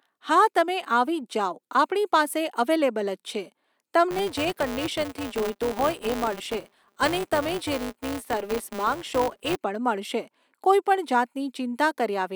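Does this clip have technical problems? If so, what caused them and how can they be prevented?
Yes. From 4.11 to 9.57 s, a filter restarted on every block starts each block from silence, adding a small transient heard as a 200 Hz buzz that tracks the speech level. A waveform shows evenly spaced ticks, and a spectrogram shows lines at 200 Hz and its harmonics. Keeping the filter state between blocks prevents it.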